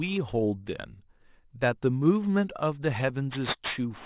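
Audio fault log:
throughout, aliasing: unfiltered content above 4 kHz folds back at about 15 dB below the speech, making sibilants gritty and metallic, which fits an 8 kHz resample.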